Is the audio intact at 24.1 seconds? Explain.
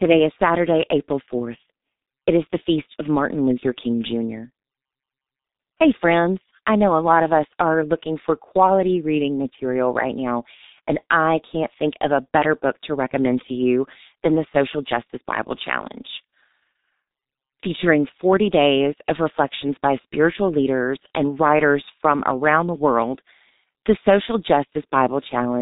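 No. At 24.1 s, as throughout the clip, G.723.1 codec damage is heavy: nothing above 3.8 kHz and a slowly updated voice model at what sounds like about 6 kbit/s leave speech muffled, hoarse, and smeared.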